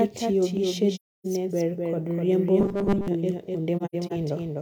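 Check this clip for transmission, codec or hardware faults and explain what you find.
There are three problems in this speech recording: a doubled track running the whole way through, two patches of AAC frame loss with muting, and a short burst of robotic buzz.

The doubled audio track is there from start to finish. A second full-band copy of the speech trails the original by roughly 300 ms, sitting a few dB lower. It has none of the smear a real room echo would give, so it sounds like a crisp, slightly quieter repeat. The likely cause is the signal being picked up twice, once through a slower route, or an edit leaving two misaligned copies.

AAC frame loss with muting shows up twice. From 0.95 to 1.26 s about 0.3 s of audio drops out. From 3.77 to 4.12 s roughly 170 ms goes missing in several short gaps, the longest around a tenth of a second. In both places the decoder zeroed the lost frames, and the overlapping transform windows ease the sound down and back up. 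The result is soft-edged holes. The first gap's length fits a run of about seven frames.

The robotic sound from repeated short buffers runs from 2.60 to 3.08 s. Across most of that stretch the speech gives way to a rigid, metallic 200 Hz buzz that only loosely follows the talking. That pitch points to a tiny chunk, about 5 ms, being looped while fresh audio was skipped. The likely cause is new data arriving too rarely and the playback filling the gaps by repeating the last buffer.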